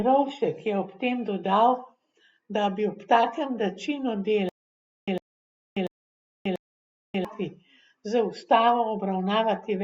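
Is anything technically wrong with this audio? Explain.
Yes. From 4.49 to 7.25 s the speech shows a stutter with silent gaps: a 103 ms fragment repeats four times at a steady 689 ms period, with 586 ms of digital silence between. This likely reflects a stalled playback stream replaying its last buffer each retry, so the intervening audio is lost.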